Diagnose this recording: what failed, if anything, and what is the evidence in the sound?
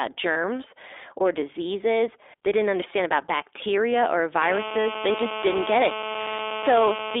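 The codec stage is at fault throughout: the sound has the clear but slightly rough, synthetic texture of the iLBC codec at 15.2 kbps, with the band held to 300 Hz to 3.6 kHz and 20 ms frames. A plain narrowband line would be band-limited without this coded graininess.

At the network stage, lost iLBC frames leave a gap from 0.32 to 0.37 s, 40 ms, which fits two 20 ms frames. Rather than silence, the decoder fills it with a held, faintly buzzy vowel-like sound, and the audio recovers immediately because each iLBC frame is decoded independently.

In the analogue wiring, GSM phone buzz appears from 4.42 s, right after "understand about bacteria or", and lasts to 7.15 s, about 7 dB below the speech. It is a hard, raspy buzz at 217 Hz with many harmonics, steady as during a call. Mains hum would sit at 50 or 60 Hz and sound smoother.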